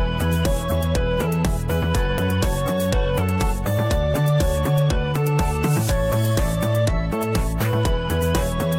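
Overlap between stream segments occurs four times: the time stamps of adjacent segments, which appear to be about 1 s long, claim some of the same stretch of audio, and the player discards that supposed duplicate even though it was unique. Each time, 25 to 40 ms of sound goes missing and the waveform jumps, giving a small click or skip at 2.18–2.21 s, 4.14–4.18 s, 5.16–5.19 s and 7.12–7.15 s.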